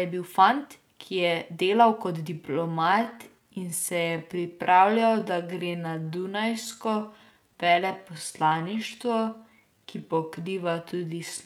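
From 2.29 s to 11.46 s the speech abruptly slows to 0.67 times its pace in a time-stretched section, likely from software lengthening it by repeating short pieces. It drags, yet pitch holds, unlike slowed playback, which would drop lower.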